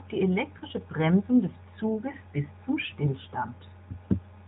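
Speech carried over the AMR narrowband mobile codec, band-limited below 4 kHz, has lost AMR speech frames at 0.58–0.64 s and 2.12–2.16 s, just before "bis zum". The decoder bridges each gap by reusing the previous parameters at falling gain, giving a brief dip consistent with one concealed 20 ms frame.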